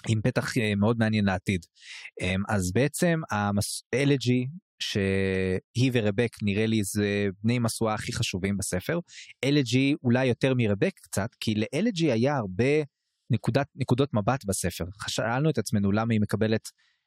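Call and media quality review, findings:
Speech recording reviewed; no audible faults found.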